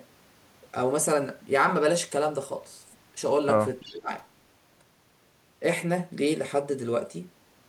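At 3.8 s a faint echo leak appears and lasts until 3.93 s. A delayed copy of the speech, arriving about 330 ms behind the original and sitting roughly 25 dB under it, comes through as a brief ghost. The likely cause is a far-end loudspeaker whose sound reached its microphone and was not fully removed by the echo canceller, so a residue of the signal returned down the line.

Almost immediately, from 3.81 s to 4.11 s, the speech is suppressed in double talk. For around 0.3 s the level sags, dipping by something like 20 dB at its deepest, before recovering. This points to an echo canceller that likely could not distinguish the near-end talker from the returning echo while both overlapped, and attenuated everything together.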